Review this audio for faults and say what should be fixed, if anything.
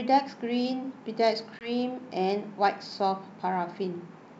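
There's one spot to fix: packet loss on the ADPCM call at 1.59 s. A couple of packets drop out and you get a hard-edged gap of about 20 ms of silence. When the speech comes back, the decoder's predictor and step size no longer match the sender's, so it returns slightly distorted until it settles around 1.70 s. The G.722 coding at 64 kbit/s around it sounds clean, with just the light upper-band hiss. To prevent it, add a jitter buffer with loss concealment, and have the decoder reset or resync its ADPCM state after a gap.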